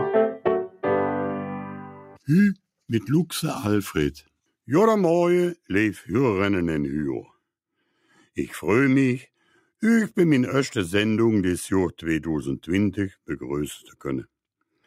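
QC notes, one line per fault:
1.82–2.18 s, sound cut by the noise suppressor: the suppressor treated wanted sound as noise and pulled it down by about 12 dB, so it briefly sinks.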